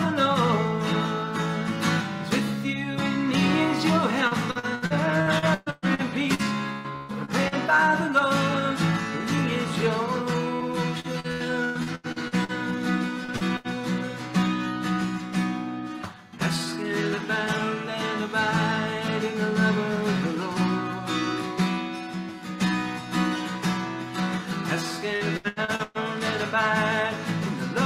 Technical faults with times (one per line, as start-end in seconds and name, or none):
4.27-7.55 repeated packet loss (robotic sound)
10.56-10.63 short concealed packet loss
11.00-12.52 repeated packet loss (robotic sound)
13.25-13.31 short concealed packet loss
13.36-13.67 burst of packet loss
25.16-25.98 repeated packet loss (robotic sound)